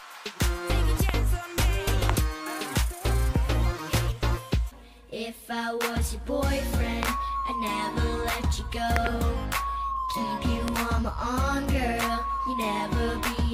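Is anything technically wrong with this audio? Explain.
Yes. A loud pop occurs five times, at 1.09 to 1.11 s, 2.10 to 2.12 s, 7.03 to 7.11 s, 8.96 to 9.09 s and 10.68 to 10.70 s. The events at 7.03 s and 8.96 s each contain two pops in quick succession, for seven pops in all. Each likely comes from a sudden voltage step or pulse, such as a plug, switch, static or driver glitch, entering the signal path. The pops peak around 20 dB above the surrounding sound, which carries on beneath them.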